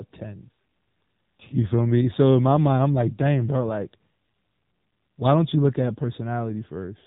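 The speech sounds narrow and boxed-in from start to finish, with nothing above about 3.8 kHz, so sibilants and breath detail are gone. The voice also takes on a plainly audible buzzy, synthetic edge. That is the AMR narrowband mobile codec at work. It samples at 8 kHz and rebuilds the voice from a vocal-tract model excited by a handful of pulses per 5 ms subframe. The degree of damage fits a low 7.4 kbps mode.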